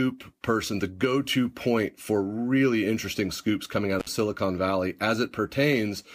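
Speech with an intermittent contact fault from 3.99 to 4.09 s, right after "interesting scoops coming out": the line opens for about 57 ms, crackling at both edges with faint hiss underneath, which marks a loose cable or plug rather than a clean digital dropout.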